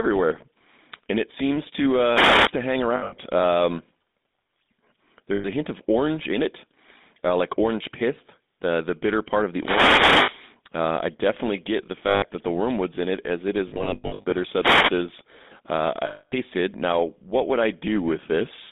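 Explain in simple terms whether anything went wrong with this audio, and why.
Several things went wrong. The whole recording passed through the GSM full-rate codec, the original mobile-phone voice compressor. It rebuilds speech from a rough model of the throat and mouth driven by a simple pulse pattern, and this clip only keeps sound between about 200 Hz and 3.7 kHz. The result is plainly damaged throughout: the speech sounds thin, boxed-in and buzzy, with a gravelly roughness.

There are three wireless microphone noise hits, at 2.1 to 2.53 s, 9.56 to 10.41 s and 14.58 to 14.95 s. Each time, the microphone's radio signal briefly faded, and the receiver's own hiss rose to fill the gap. You hear a sudden swish or burst of static over the speech. The one near 10 s is the longest, close to a second.

Lost GSM frames happen when chunks of the phone signal fail to arrive. The system fills each gap by repeating the last good chunk at a fading level, so the sound freezes into a short, rough, metallic ringing. 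This occurs at 2.96 s (about 140 ms, broken up), 5.34 s (100 ms), 10.22 s (60 ms, inside the static burst), 12.08 s (140 ms), 13.68 to 14.33 s (the worst, scattered dropouts), and 16.06 s (about a quarter second).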